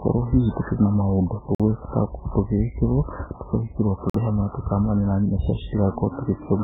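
Throughout, the speech is band-limited with nothing above 3.7 kHz and sounds watery and swirly, most likely heavy MP3 compression at a very low bitrate, around 8 kbps. At 1.55 s and again at 4.10 s, a gap between chunks cuts in: a hard-edged 48 ms silence at joins spaced about 2.5 s apart, interrupting the sound without dropping any.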